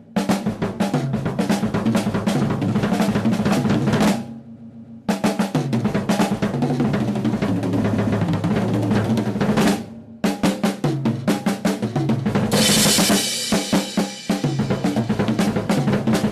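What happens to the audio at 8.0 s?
Repeated frames occur from 7.92 to 8.20 s. A 139.3 ms block of the compressed stream, which fits a run of six frames, was written or delivered more than once, so the decoder plays that same stretch two extra times back to back. The result is a stutter in which the same fraction of a second is heard three times in a row, and the audio after it runs 278.6 ms later than it should.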